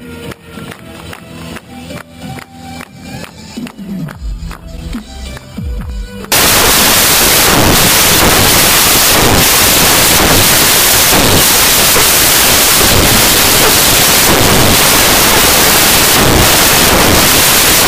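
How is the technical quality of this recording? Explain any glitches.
The recording breaks down badly partway through. From 6.32 s to the end, the sound is swamped by loud, harsh noise, close to white on the louder passages. This is samples built from the wrong bytes: the decoder assembles each sample from misaligned or swapped bytes, so the rapidly fluctuating low-order bits end up in the most significant position. The result behaves like random large values rather than the original waveform.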